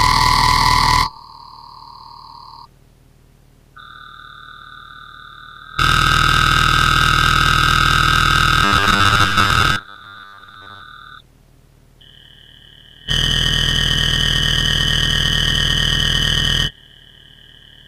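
From 8.64 to 10.82 s the audio takes on a robotic sound from repeated short buffers. A rigid, metallic buzz at 100 Hz replaces the natural texture while still loosely tracing the original sound. The likely cause is audio arriving too seldom, so the software loops the last 10 ms or so over most of the stretch and skips real material. On a spectrogram, evenly spaced harmonic lines every 100 Hz appear, and the waveform shows a repeating pattern.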